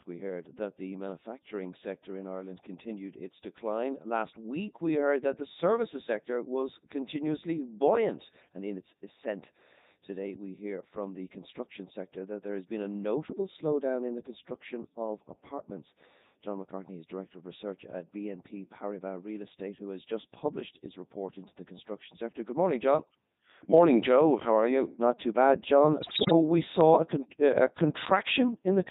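Codec 2 vocoder coding runs through the whole of this speech clip. The voice has the robotic, buzzy character of a decoder that rebuilds sound from sine waves using only pitch, voicing, energy and a spectral envelope, so the original waveform is gone. The heavy damage and synthetic tone fit Codec 2's top 3.2 kbit/s mode. Bit errors on digital voice radio hit from 26.00 to 26.32 s. There, the synthetic voice lurches in pitch, level and tone colour and breaks into warbles and bleeping gibberish. Corrupted bits each steer a whole frame's parameters, and the damage here fits roughly one bit in ten flipped across about fifteen vocoder frames.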